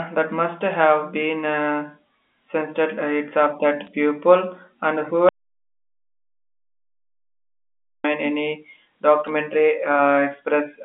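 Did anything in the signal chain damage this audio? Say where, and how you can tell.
Yes. Bit errors on a digital phone line damaged the audio at the network stage. Sharp ticks sit over the speech from 3.85 to 3.88 s and again at 9.27 s. The line carries G.711 A-law at 64 kbps, band-limited to about 250 Hz to 3.5 kHz. Each flipped bit corrupts a single 8-bit sample. A hit on the sign bit or a high-order bit throws that sample far from its true value, which is heard as a click. The error rate is around two bits per thousand.

There is also an audio dropout to silence from 5.29 to 8.04 s, lasting 2.76 s. The speech stops abruptly and then resumes mid-flow. The gap is silent, with no line hiss or room tone. That means nothing reached the encoder while the recording kept running. The likely cause is at the capture end, such as a lost input link, a disconnected device or a brief mute. Whatever was spoken in that span is gone.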